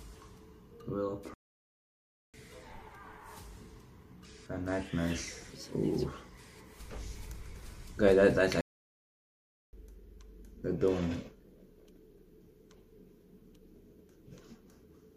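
At 1.34 s the sound just cuts out for about a second, picking up at 2.34 s, and it happens again from 8.61 to 9.73 s, roughly 1.1 s. Those are playback stalls, likely the player running short of data or its thread getting blocked.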